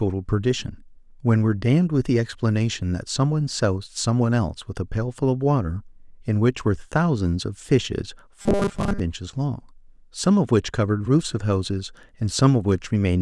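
Robotic sound from repeated short buffers, 8.42 to 9.00 s: speech becomes a rigid 200 Hz buzz, likely from a buffer of about 5 ms looping while most real audio is skipped.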